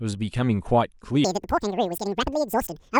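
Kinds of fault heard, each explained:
Wrong sample rate: from 1.24 s to the end, the speech is played back at twice the rate it was captured at, with no conversion between the two. The mismatch points to material made at 24 kHz being clocked out at 48 kHz. Speed and pitch rise together by that factor of 2.0, so the voice jumps a full octave, 12 semitones, and sounds high and hurried, moving at double speed until the audio ends.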